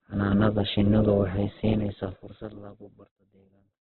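Opus compression runs through the whole speech clip: the band stops near 4.2 kHz, and what remains sounds rough and grainy, with noise filling in where detail should be. This likely comes from a very low bitrate, around 8 kbps, starving the music-mode coder. A smooth fade-out, starting at about 1.5 s and finishing at 4.0 s, carries that grainy sound down to silence.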